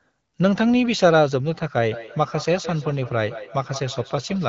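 From 1.91 s to the end of the speech, a feedback echo between two devices sets in. A second device in the same room replays this talker's audio, and the microphone picks it up again. Its echo canceller only removes its own device's playback, so the return gets through. Each sound comes back after roughly 150 ms, up to about 14 dB below the speech, thinner and ringing, heard through the AMR-WB band limit. The fixed, regular repeat interval distinguishes it from room reverberation, which smears smoothly.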